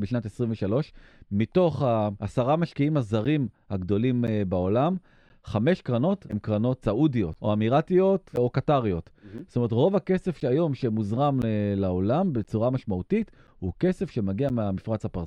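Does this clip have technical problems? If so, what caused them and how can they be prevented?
Yes. Something in the system is blocking the USB bus or the audio driver at a fixed interval, causing periodic USB or driver dropouts. Every 1.024 s from 3.25 s to 14.50 s, around 10 ms of audio is lost and replaced by silence. About ten evenly spaced ticks cut into the speech, heard only where there is signal. To prevent this, find and disable the background task that polls the bus, or move the interface to its own USB controller.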